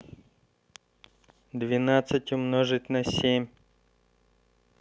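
No technical faults can be heard anywhere in the recording; the speech signal stays steady and intact throughout.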